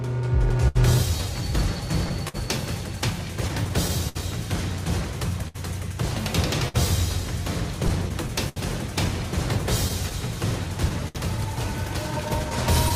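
Clock drift between sender and receiver runs throughout: the sender's clock is roughly 5% slow, so the buffer keeps draining, causing recurring, unevenly spaced timing hiccups. Scattered short gaps, around thirty, appear from 0.09 to 12.92 s. Each is patched by extending the preceding sound, leaving brief ticks and smears, the longest near 70 ms.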